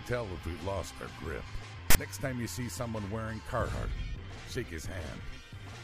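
At 1.90 to 1.95 s, a 45 ms burst of loud, harsh static with abrupt edges cuts in: file tags played as audio. A block of text metadata is being read as samples, giving a rasp skewed to one side rather than centred, unlike a random digital click or dropout.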